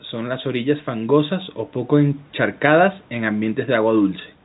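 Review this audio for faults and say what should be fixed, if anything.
Nothing needs fixing: the speech has the narrow telephone band of G.711 mu-law coding, consistent with a 64 kbps line, and the call microphone processing trims only the deepest bass, as intended.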